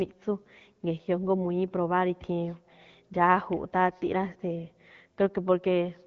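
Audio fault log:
The signal carries the band-limited character of an AMR wideband (HD Voice) codec, with no content above about 7.5 kHz and only light coding texture, which fits a rate around 12.65 kbit/s, and nothing in it departs from that path's normal behaviour.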